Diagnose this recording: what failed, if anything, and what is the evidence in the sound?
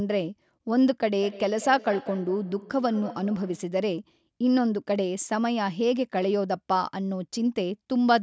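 Feedback echo between two devices, call-processing stage, 1.2 s to 3.74 s: the speech returns at intervals of roughly 200 ms, peaking about 16 dB below the direct sound. A second device in the room replays this microphone's audio, which is picked up again. Each echo canceller removes only its own device's playback.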